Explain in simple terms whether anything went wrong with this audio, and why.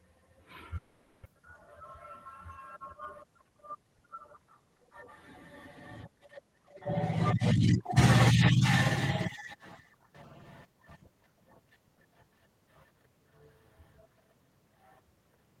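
Two things go wrong near the start.

The first is a long network dropout, from about 0.77 to 1.27 s. For roughly half a second the sound turns into a smeared, fading buzz instead of clear speech. There is no true silence; the gap is papered over the whole way. About 0.4 s of the real audio never comes back. The likely cause is that the audio stopped arriving for a moment, so the receiver made up a filler sound.

The second is a jitter buffer speed-up, from about 1.36 to 3.25 s. The speech runs about 3% faster than normal, but the pitch stays the same. The receiver was holding more audio than it aims for. So the receiver quietly trimmed tiny slices, well under a tenth of a second in total, to catch up on the built-up delay.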